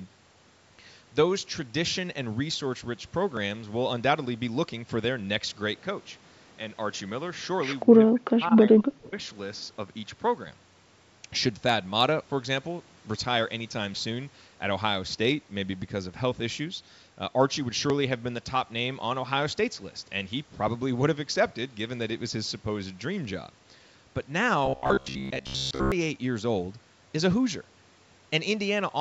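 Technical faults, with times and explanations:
5.80–10.47 s, input switched to a poorer device: The recording likely jumped to a lesser microphone or headset profile. With no gap at the switch, the speech suddenly turns duller, drops about 5 dB in level and gains a faint new noise floor, then clears up again.
7.85–9.16 s, speech suppressed in double talk: The echo canceller likely mistook the talker for loudspeaker echo while both sides spoke at once, so it pushed the speech down, by up to about 40 dB, for roughly a second in total within this stretch.
24.66–25.92 s, robotic sound from repeated short buffers: Audio likely arrived too late, so the software kept replaying a short buffer instead of fresh speech for most of this stretch. The repeats impose a rigid 66.7 Hz metallic buzz, which fits a buffer about 15 ms long.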